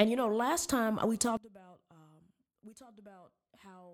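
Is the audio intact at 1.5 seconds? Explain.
No. From 1.37 s, just after "know last time we", to the end, the centred speech drops by about 24 dB, likely from one channel inverted: with one stereo side's polarity reversed, the shared centre content cancels when summed to mono.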